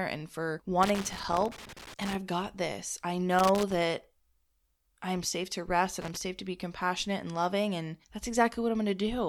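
Right after "and for", from 0.83 to 2.15 s, there's loose connector crackle: an irregular, scratchy burst that runs until "got this I". It comes back from 3.39 to 3.82 s, just after "got this I", and once more from 6.02 to 6.21 s, between "I'm safe to rest" and "to be compassionate and". A worn or dirty contact is making and breaking as it shifts, chopping the signal on and off.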